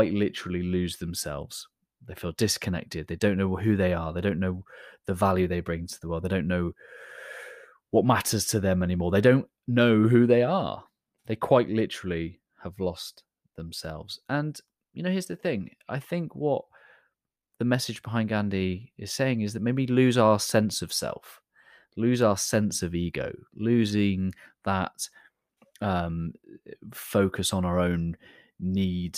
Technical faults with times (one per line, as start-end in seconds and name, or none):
none